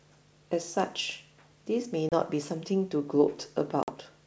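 Speech over what sounds like G.722 wideband coding has packet loss on an ADPCM call: hard-edged silent gaps at 2.09–2.12 s (30 ms) and 3.83–3.92 s (50 ms). Unlike a clean dropout, the decoder's predictor and step size lose sync, so the sound resumes slightly distorted before settling.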